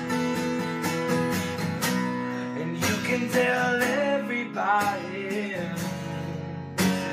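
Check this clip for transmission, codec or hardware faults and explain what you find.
Nothing stands out here: I listened closely and heard no dropouts, glitches or anything else that points to trouble in the transmission, the codec or the hardware.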